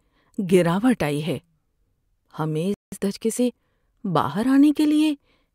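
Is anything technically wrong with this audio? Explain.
Yes. At 2.74 s the player likely ran short of data or had its thread blocked, causing a playback stall: the speech cuts to silence for about 180 ms before resuming at 2.92 s. From 2.92 s to 4.12 s, time-compressed catch-up trims and cross-fades small slices to clear the backlog, so the speech runs about 1.15 times fast at normal pitch.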